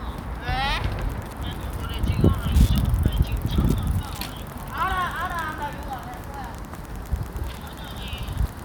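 Wi-Fi interference runs from 0.97 s to the end at 8.65 s. A nearby Wi-Fi radio's 102.4 ms beacon is rectified by the audio circuit, producing a steady tick about ten times a second, roughly 25 dB below the sound.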